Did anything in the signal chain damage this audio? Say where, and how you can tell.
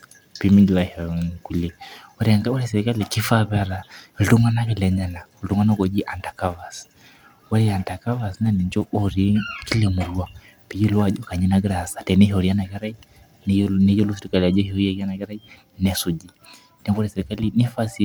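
No, nothing in the signal chain damaged this audio.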